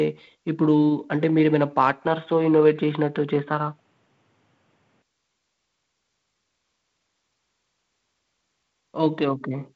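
From 2.07 to 5.02 s the speech turns dull and boxy, with nothing above 3.8 kHz and faint new noise. An input switched to a poorer device is the likely cause.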